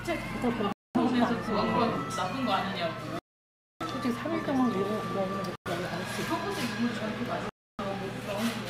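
Bluetooth stalls interrupt this everyday-sound recording four times: at 0.72 s for about 225 ms, at 3.19 s for about 617 ms, at 5.56 s for about 103 ms, and at 7.49 s for about 297 ms. Each time the audio drops abruptly to silence and then carries on. The likely cause is radio interference delaying packets, so the headphones' buffer empties and playback halts until retransmitted data arrives.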